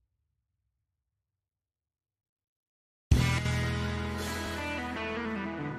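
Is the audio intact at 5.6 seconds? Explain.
Yes, the audio at 5.6 seconds is intact, with no dropout, click, distortion or other fault at that moment.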